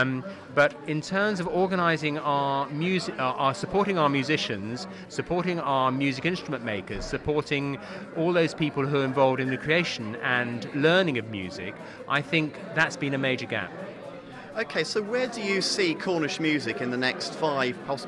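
No technical faults can be heard anywhere in the audio.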